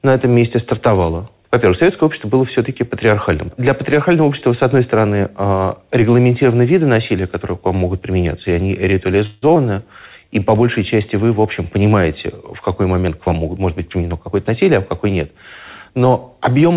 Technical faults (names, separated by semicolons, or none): call audio freeze; skip ahead; jitter buffer slow-down; jitter buffer speed-up